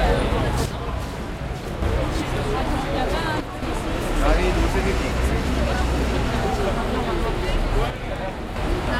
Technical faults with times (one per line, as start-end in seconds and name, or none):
0.66-1.82 one channel drops out
3.40-3.62 one channel drops out
7.90-8.56 one channel drops out